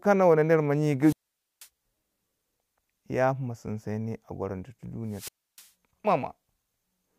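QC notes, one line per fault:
1.01–1.68 s, wireless microphone squelch dropout: just after "mo nyi" the speech cuts to near silence for about 490 ms, then returns. The radio link from the transmitter faded below the receiver's threshold, so the squelch gated the output.
5.10–5.69 s, wireless microphone squelch dropout: a second, shorter hole of about 300 ms, from the same loss of RF signal strength tripping the squelch before the carrier recovered and audio resumed.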